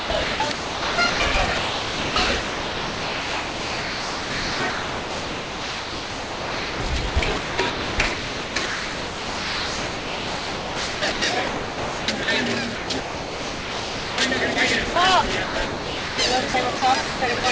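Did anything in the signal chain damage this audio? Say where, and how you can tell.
Yes. Sound chopped by the voice detector, at the call-processing stage: during 0.0–6.8 s, 7.1–11.2 s, 11.5–12.3 s, 12.8–14.2 s, 15.4–16.2 s and 16.5–17.4 s the real sound keeps switching to a flat synthetic hiss and back. This is likely a sender-side detector gating repeatedly, with comfort noise filling each gap.

Sound dropped by the voice detector, at the same stage: at 14.54 s and 14.94 s a brief moment of sound, about 20 ms each, gives way to steady noise. The likely cause is the detector mistaking those moments for background and pausing transmission. Across all of these events the band stops at 8 kHz, consistent with a G.722 wideband call path.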